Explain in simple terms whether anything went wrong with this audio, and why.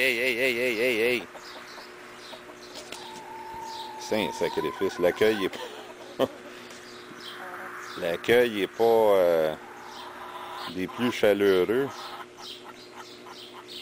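At 5.15 s there is a brief watery blip, DAB burbling: weak reception let a few bit errors through, briefly putting short blips of noise into single frequency bands.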